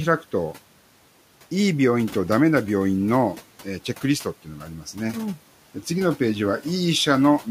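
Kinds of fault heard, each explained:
Speech cut by the noise suppressor: between about 4.45 and 5.15 s the suppressor mistakes part of the speech for background and pulls it down with the room noise, which sits about 22 dB below the talker. The deepest dip is about 11 dB, and roughly half a second of speech in that stretch ends up sounding swallowed and faint, as if the talker briefly turned away from the mic.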